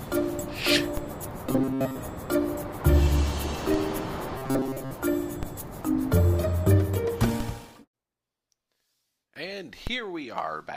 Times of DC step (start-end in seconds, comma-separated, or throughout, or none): 0.97, 3.74, 5.43, 7.40, 9.87